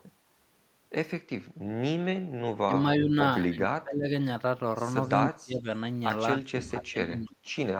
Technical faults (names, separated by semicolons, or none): speech suppressed in double talk; echo leak